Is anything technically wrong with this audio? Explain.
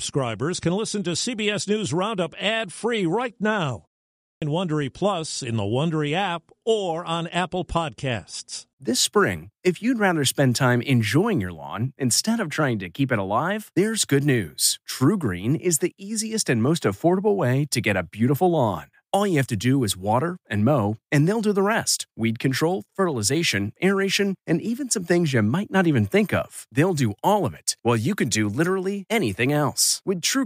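Yes. At 4.18 s, just after "right now" and a pause of about 0.39 s, there is a clipped start after a pause: roughly the first quarter second (about 240 ms, to 4.42 s) of the next speech is missing. The playback path has gone idle during the short gap and has to wake or relock before it passes sound again, so the speech begins abruptly, already mid-sound. Here the opening of the speech itself is lost.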